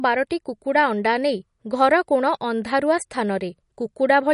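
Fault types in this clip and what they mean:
MP3 compression: the speech sounds watery and swirly with nothing above 10.5 kHz, likely from MP3 encoding starved of bits, which fits about 40 kbps.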